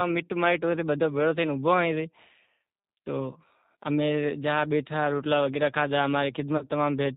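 G.729 codec damage runs through the whole speech clip, and it is plainly audible. Everything above 4 kHz is missing, and the voice sounds rough and slightly synthetic. That fits an 8 kbit/s coder that rebuilds speech from a vocal tract filter, a pitch predictor and a few pulses per frame.

VoIP packet loss concealed by the speech codec occurs from 6.57 to 6.65 s. About 40 ms of audio is lost, which fits two dropped packets. The decoder fills the gap by repeating its last pitch and filter at falling gain, so the sound is stretched into a buzzy tone or coloured noise that fades. Because each frame builds on the previous one, the voice stays weakened briefly after the gap closes.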